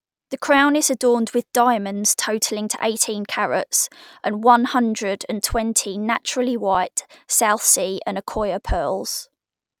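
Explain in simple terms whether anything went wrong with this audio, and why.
At 6.75 s there's a tiny underrun with held sample. The playback buffer briefly ran dry, so the output froze on its last value for about 3.5 ms, a flat pause in the speech. Nothing got skipped, and it picks up exactly where it stopped, so it ends softly.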